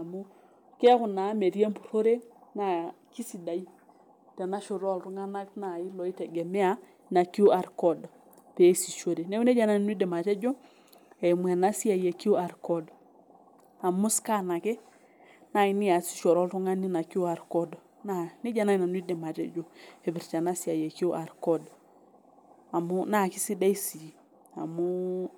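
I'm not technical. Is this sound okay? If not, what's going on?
Yes, this sound is okay; there's nothing going on that needs fixing.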